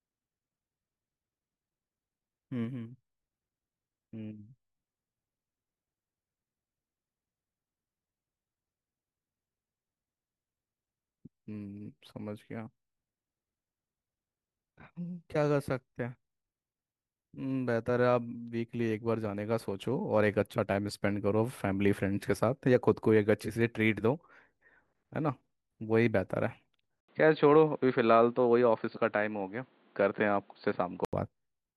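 At 27.0 s, after an 80 ms gap, speech turns dull. Nothing sounds above 4.6 kHz until 31.1 s. Input likely switched to a poorer device.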